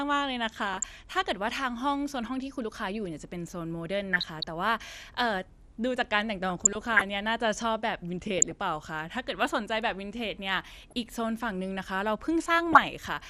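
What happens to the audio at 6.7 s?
At 6.7 s the sound breaks into DAB burbling, from 6.49 to 7.02 s. Bit errors have slipped past the error correction into the coded stream, a small fraction of a percent of bits, but enough to corrupt many frames in a row. Damaged samples put short blips of noise in single sub-bands, and damaged scale factors make sub-bands leap in level for up to a frame. The result is about half a second of burbling laid over the speech.

Underneath, the speech is dull and gurgling throughout, and it stays that way through this moment. That matches MP2 compression, likely the cause, at a rate that fits about 80 kbps. Layer II splits the signal into 32 sub-bands and shares out bits between them. At this rate upper bands switch off and flicker back, and the remaining bands are coarsely quantised. That gives the granular, muffled texture.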